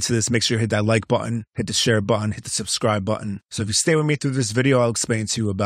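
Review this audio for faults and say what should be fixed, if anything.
Nothing stood out on listening to this speech recording, so there is nothing that needs fixing.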